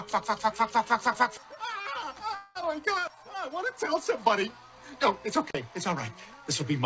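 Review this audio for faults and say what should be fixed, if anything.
A short stall from a late packet at 1.82 to 1.86 s holds the sound for 25 ms while the jitter buffer waits. Nothing is lost and the held sound is short, unlike a freeze. A slightly deeper jitter buffer would absorb this.

A call audio freeze at 2.35 to 2.57 s stretches the sound into a fading buzz or hiss for about 204 ms, likely from packets delayed in transit. It then resumes where it stopped. Steadier network routing or adaptive buffering would prevent it.

Intermittent contact at 5.48 to 5.55 s opens the line for about 47 ms. Crackle at both edges and faint hiss set it apart from a network stall. Reseating or replacing the loose cable or plug fixes it.

Nothing above 8 kHz comes through, as expected from the G.722 call path.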